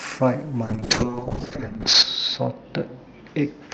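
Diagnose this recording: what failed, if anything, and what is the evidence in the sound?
From 0.65 s to the end the speech turns rough, watery and muffled, bottoming out for about 1.38 s. That is a call bitrate drop at the codec/network stage: the bandwidth estimate fell, so Opus coded more coarsely and lost its highs, consistent with roughly 48 kbps falling to about 7 kbps.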